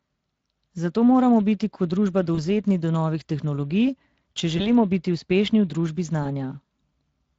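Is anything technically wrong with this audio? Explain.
Yes. The speech has been through the Speex codec, a CELP coder designed for low-bandwidth voice links. At this setting, which sounds like a mid-rate mode around 20 kbps, the encoder has too few bits to reproduce the excitation signal faithfully. The decoder's rebuilt version of it is coarse, so the voice comes out plainly noisy and hoarse across the whole clip.

On top of that there is VoIP packet loss concealed by the speech codec, at 2.35 to 2.40 s, 4.57 to 4.70 s and 6.23 to 6.28 s. Each gap is consistent with a single lost 20 ms frame. When a packet is missing, the decoder extrapolates from its last pitch and filter state and lowers the gain as it goes. You hear a brief buzzy or noisy, smeared stretch of the preceding sound that fades, and the voice stays weak or distorted for a few tens of milliseconds after real packets resume.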